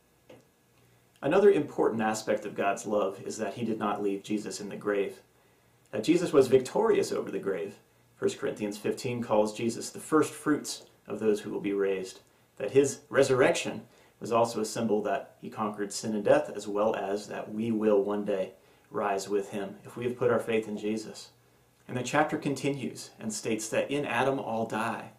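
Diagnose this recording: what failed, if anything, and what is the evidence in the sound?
A bit error spike at 15.46 s: one isolated tick, reaching about -40 dBFS, broadband and unrelated to the surrounding sound. A single flipped bit in storage or on a digital link made one sample jump by a power of two and then return.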